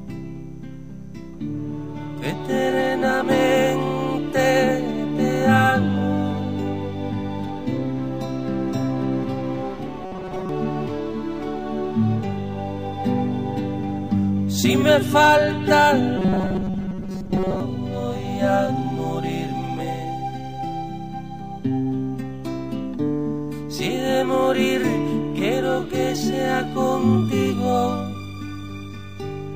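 From 10.06 to 10.49 s and 16.17 to 17.60 s, robotic sound from repeated short buffers: a rigid 188 Hz buzz, likely from replaying roughly 5.3 ms buffers while most real audio is skipped.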